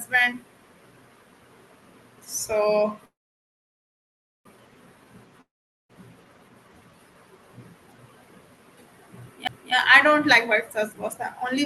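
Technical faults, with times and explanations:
3.05–4.47 s, call audio freeze: packets were likely held up and the jitter buffer ran dry, so the last sound decays as a buzz into roughly 1.3 s of silence, then resumes exactly where it stopped.
5.41–5.91 s, long network dropout: likely no packets arrived, so a fading buzz gives way to silence, and the audio returns about 0.48 s further on, that stretch lost.
9.47 s, CD skip: the laser jumped across the spiral, muting for about 10 ms with a tick and a sudden positional jump just before "I don't like".
10.47–11.65 s, jitter buffer speed-up: after "I don't like" the overfull buffer trims pitch periods repeatedly, so speech runs at 112% speed, same pitch, sounding hurried.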